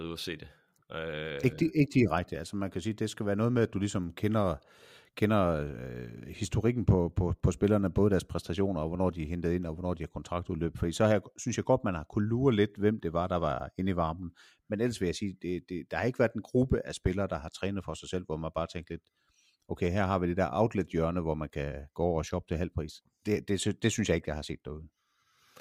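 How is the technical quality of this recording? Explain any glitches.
The quality is compromised throughout by one fault, a resampler restarted on every block. The rate converter, likely taking 44.1 kHz to 48 kHz, processed each 100 ms block separately, leaving an error at every block edge; the speech carries faint ticks at 10 Hz.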